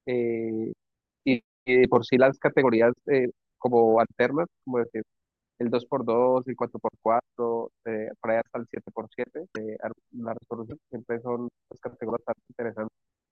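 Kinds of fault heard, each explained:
Broken MP3 bit reservoir: three short disturbances near 9.54, 10.69 and 12.09 s, each about 24 to 28 ms long, roughly one 24 ms frame. The sound skips forward and the instant after each skip comes out garbled. The likely cause is missing MP3 frames, leaving the next frame to borrow reservoir bytes that belong to another frame. Unlike a single-sample click or a longer silent dropout, each fault spans about one frame and follows a jump ahead.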